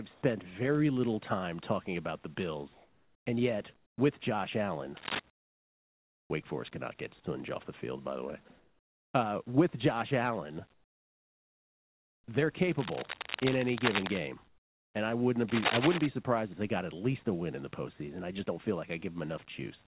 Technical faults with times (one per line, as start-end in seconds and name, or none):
0.14-0.22 sound dropped by the voice detector
2.74-3.26 comfort noise in place of the background
3.76-3.98 comfort noise in place of the background
4.97-5.20 cable scratch noise
5.30-6.30 comfort noise in place of the background
8.48 sound dropped by the voice detector
8.58-9.14 comfort noise in place of the background
10.74-12.28 comfort noise in place of the background
12.78-14.18 cable scratch noise
14.48-14.94 comfort noise in place of the background
15.48-16.06 cable scratch noise